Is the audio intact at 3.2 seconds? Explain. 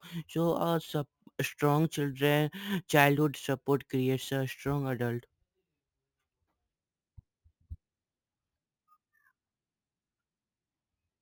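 No, at 3.2 s you're hearing imaging from sample-and-hold upsampling, and it runs through the whole clip. The speech was likely raised from around 16 kHz by just repeating samples, so a mirrored copy sits at 8 to 16 kHz, about 20 dB down, giving a metallic fizz that tracks the voice.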